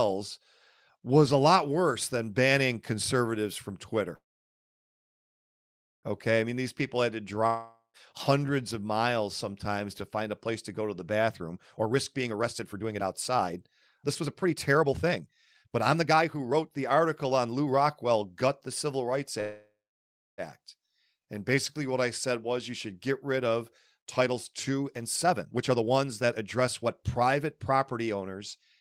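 At 4.15 s the speech stops, the last sound lingers briefly, and then there is about 1.8 s of silence before it resumes at 6.06 s with nothing skipped. This is a call audio freeze: packets were likely held up, so the jitter buffer ran dry and the receiver held a gap open until they arrived.

From 7.47 s to 7.97 s a fading hiss gives way to brief silence, and the speech returns with about 0.48 s gone. This long network dropout likely means that stretch of audio never arrived at all.

Between 11.29 s and 19.15 s the speech sounds hurried, running at about 123% speed with unchanged pitch. This jitter buffer speed-up comes from the receiver trimming many short pitch-period pieces, roughly 2 s in total, to shed excess buffered delay.

A second call audio freeze runs from 19.41 s to 20.41 s. It leaves a gap of just under 1 s, about 0.66 s of it silent, and then continues where it stopped. Again the likely cause is late packets rather than lost ones.

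From 24.07 s to 28.59 s the speech rushes again at about 120% speed with steady pitch. Roughly 1 s is trimmed away in this second jitter buffer speed-up.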